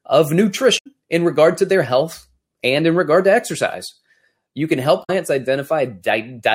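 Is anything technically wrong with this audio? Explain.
Yes. This speech clip has two short bursts of damaged data in a compressed stream, at 0.75–0.87 s and 5.00–5.10 s. In each span, corrupted bytes in the encoded stream cause the decoder to misread frames, lose sync and hunt for the next valid frame header before normal decoding resumes. The result is a brief chirp, squawk, click or short hole of about a tenth of a second, breaking through the speech at those points.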